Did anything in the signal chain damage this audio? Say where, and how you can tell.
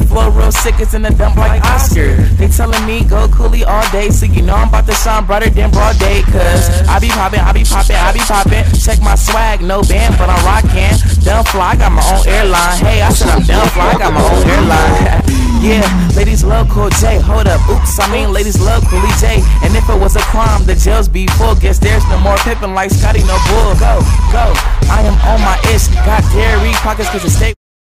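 Yes. Two sharp clicks land at 21.71 s and 22.63 s, each a thin vertical line across the spectrum. These are dropped samples. The waveform jumps straight from one value to a later one, skipping only a fraction of a millisecond. That is far too short to remove any audible sound, so all you hear is the step itself. The stage is likely the driver or buffer, where a brief underrun skips a few samples.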